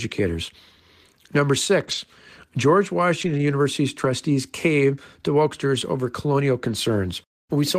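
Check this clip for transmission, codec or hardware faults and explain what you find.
The speech has lost packets rebuilt from error correction at 1.83 to 1.93 s, 3.21 to 3.43 s, 4.03 s and 6.67 to 6.73 s. Each next packet carried a low-bitrate copy that the decoder played, so there are no gaps. Instead, brief rough, noisy patches of about 60, 120, 20 and 40 ms appear.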